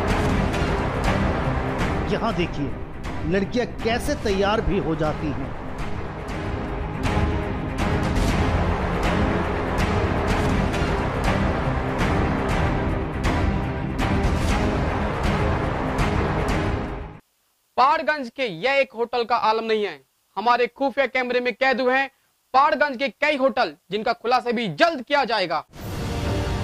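No technical faults can be heard anywhere in the recording; the signal holds steady with no disruption at any point.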